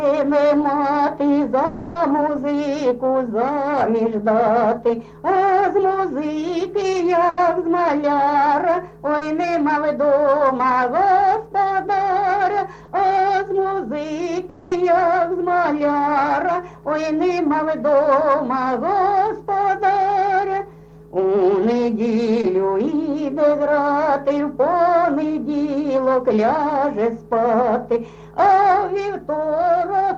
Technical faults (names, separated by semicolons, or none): long network dropout; burst of packet loss; short concealed packet loss